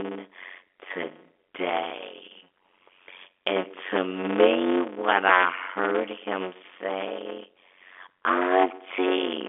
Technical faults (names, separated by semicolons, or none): block size mismatch (padded)